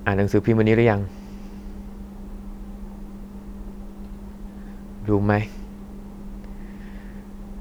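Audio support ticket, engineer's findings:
No faults found on listening; speech clip shows no defects attributable to capture, processing or playback chain.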